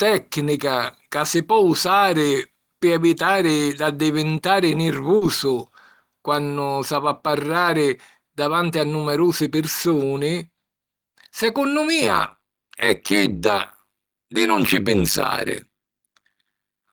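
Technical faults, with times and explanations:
5.17–5.23 s: short concealed packet loss. 40 ms of speech failed to reach the decoder in time. The receiver filled the gap by extending the preceding sound, then blended back into the real signal. This leaves a brief smear or wobble.
12.02 s to the end: overlap-add ripple. The audio was reassembled from windowed frames whose overlap does not sum to a constant gain, so the level dips by about 60 dB once per frame, roughly 100 times a second. This produces a metallic buzz with extra tones around the voice.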